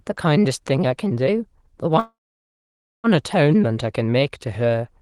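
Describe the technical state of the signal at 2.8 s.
At 2.8 s the signal is inside a call audio freeze lasting from 1.99 s to 3.07 s, about 1.05 s in all. The sound first carries on as a brief fading buzz. By 2.8 s it has dropped to silence, which takes up about 0.91 s of the stall. The likely cause is delayed packets draining the jitter buffer. When the audio resumes it picks up where it stopped, so nothing is lost, only delayed.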